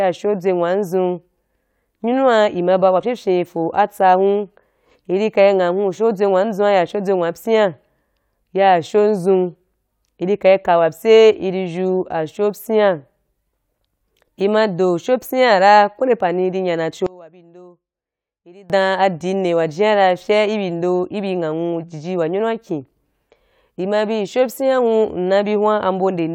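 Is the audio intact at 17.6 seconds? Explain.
No. From 17.06 to 18.70 s, just after "nde pani i nya", the speech drops about 25 dB to a faint trace, likely from one channel inverted cancelling in mono.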